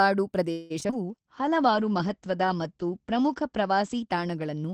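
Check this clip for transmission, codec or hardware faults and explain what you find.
Three faults are present, all on the transmission side.

From 0.51 to 0.94 s there is repeated packet loss, which gives the speech a robotic quality. Five gaps fall close together, the longest about 187 ms. Each gap is bridged by extending the preceding sound, so roughly half of this span is synthetic fill. The result is choppy speech with fragments missing.

From 1.08 s to the end there is a call bitrate drop. The encoder was pushed to far fewer bits, and the sound fits a fall from about 32 to 11 kbps. The audio bandwidth narrows from 20 kHz to 8 kHz, so the speech turns muffled and rough, worst for roughly two seconds at the lowest rate.

From 1.23 to 1.72 s a jitter buffer slow-down repeats short pitch periods to rebuild its reserve. This stretches the passage by 37 ms, so it plays at 94% speed with unchanged pitch. 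Sounds are slightly drawn out.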